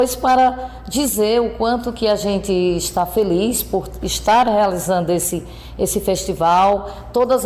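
No technical faults can be heard anywhere in the audio, and the signal stays steady and continuous throughout.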